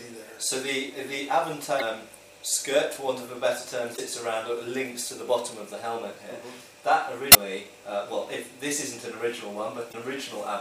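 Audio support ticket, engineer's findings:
Damaged data in a compressed stream, at 1.77–1.82 s, 3.93–3.99 s, 7.30–7.36 s and 9.89–9.95 s. Each a brief chirp, squawk, click or short hole, about 60 ms. Probable component: transport or storage feeding the decoder. Corrupt bytes inside frames; decoder misreads them, loses sync, resumes at next valid frame header. Irregular spacing, four hits across the clip.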